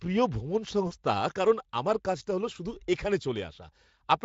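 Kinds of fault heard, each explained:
VoIP packet loss concealed by the speech codec: after "প্রিয় ভ্রমণ", 40 ms goes missing, and the decoder stretches the preceding pitch and filter into a brief, fading sound.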